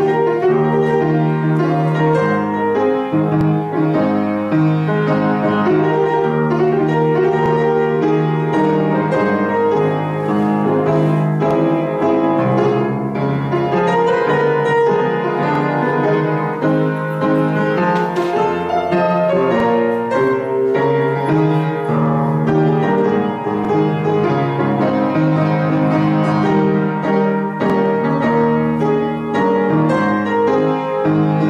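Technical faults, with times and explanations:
3.41, 7.46, 11.51, 15.55, 19.60, 23.65, 27.70 s: overlapping chunks. Each 4 s chunk begins about 48 ms early, replaying that slice as a regular stutter-click.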